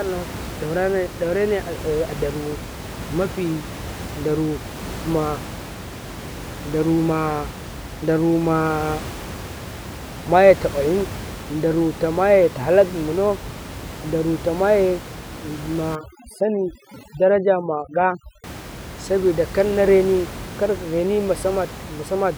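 From 15.95 to 18.44 s there's overdone noise removal. A noise reducer pushed too hard is clamping bands near its noise estimate, so the room noise, about 13 dB under the speech elsewhere, drops to twinkly near-silence.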